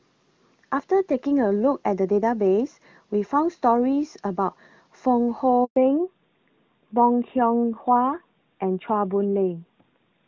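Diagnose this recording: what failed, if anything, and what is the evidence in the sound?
A handover gap at 5.64 to 5.76 s points to the network stage. The speech dies away almost instantly and 120 ms of silence follows, because no frames reached the phone while the call was being passed between networks. Whatever was said in that window is lost.

A fallback to narrowband starts at 5.76 s and lasts to the end, a codec-stage change. Before the gap the speech carries clean HD Voice detail up to about 7 kHz, which fits AMR-WB near 23.85 kbit/s. After it, nothing above 4 kHz survives, which fits AMR-NB at 12.2 kbit/s, and the voice sounds duller and rougher.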